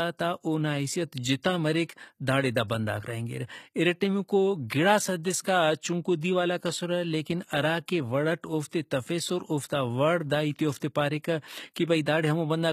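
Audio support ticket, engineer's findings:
Likely HE-AAC compression at a low bitrate, consistent with about 20 kbps. Treble is rebuilt by band replication from lower bands rather than coded, so upper harmonics misalign: s sounds gritty, metallic and lispy, plainly audible throughout the speech.

Pre-echo from transform-block noise spreading ahead of sharp onsets. Short hiss, about 20 ms, at 6.21 to 6.23 s just before "دیوالاک اسرہ لیکن ہراکہ", and about 18 ms at 10.80 s just after "وڑ دا ہیتے". Attacks sound softened, smeared.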